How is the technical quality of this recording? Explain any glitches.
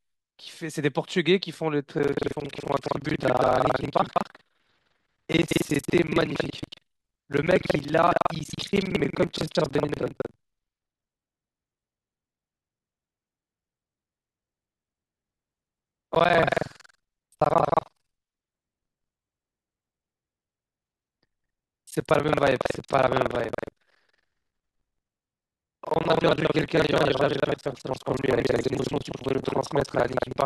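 The recording is marred by one persistent fault. Buffer tearing runs from 1.95 s to the end: writer and playback read pointer overlap, so roughly two fifths of each 21.5 Hz buffer (fitting a 2048-sample buffer) replays audio about a fifth of a second old, producing a robotic rattle over the speech.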